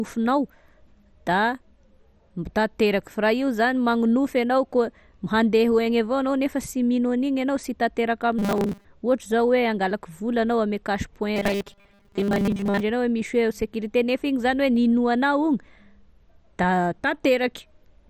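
Speech, with heavy MP2 compression damage throughout: the sound is dull and gurgling, with granular distortion. This is likely low-bitrate MPEG Layer II coding, around 56 kbps, starving and switching off upper sub-bands. From 8.39 to 8.86 s and again from 11.36 to 12.81 s, the voice collapses into a rigid metallic buzz at 200 Hz. This is robotic sound from repeated short buffers: a 5 ms block replayed for most of each span, pointing to late-arriving audio being filled with repeats.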